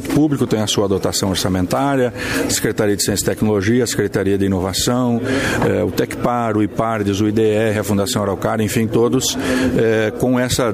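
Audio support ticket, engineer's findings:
Nothing stood out on listening through this one.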